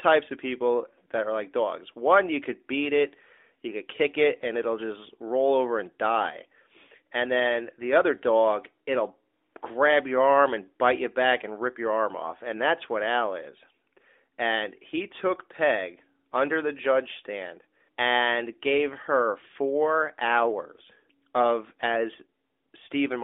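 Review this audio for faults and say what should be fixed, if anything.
Nothing needs fixing: the speech comes through a narrowband mobile path, most likely the AMR narrowband mobile codec at its top rate of about 12.2 kbps, with the band held to roughly 250 Hz to 3.6 kHz and only light colouring from the coding.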